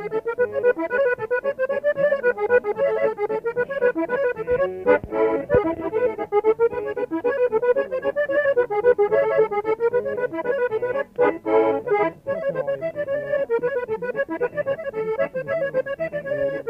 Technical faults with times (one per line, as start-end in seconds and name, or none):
none